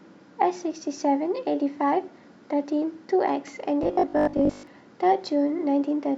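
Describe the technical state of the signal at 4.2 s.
At 4.2 s the speech has robotic sound from repeated short buffers, from 3.83 to 4.67 s. It likely comes from re-playing about 20 ms snippets, forcing a rigid 50 Hz metallic buzz.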